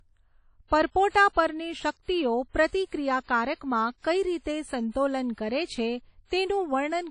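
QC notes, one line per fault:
Throughout, WMA compression: the speech sounds ringing and washy, with a plainly audible hiss that breathes with the signal and nothing above 10.1 kHz. The likely cause is a low-rate transform codec, consistent with 32 kbps. The breathing hiss distinguishes it from a simple low-pass filter.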